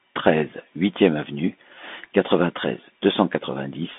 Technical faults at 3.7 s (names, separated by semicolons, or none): Bluetooth CVSD headset codec